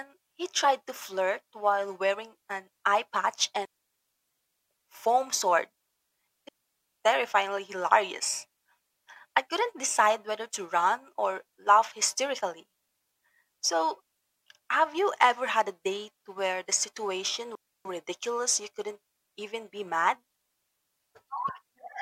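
At 0.63 s, just before "to flirt while wearing", compressed frames are skipped. About one frame, roughly 20 ms, fitting a 23 ms frame, goes missing, so the audio jumps ahead. Then come three digital wireless dropouts, where the receiver mutes into clean near-silence with no noise burst: 3.65–4.71 s between "wearing an eye patch" and "foam sword", 6.49–6.88 s, and 17.55–17.85 s between "date where the situation" and "ridiculous you couldn't even".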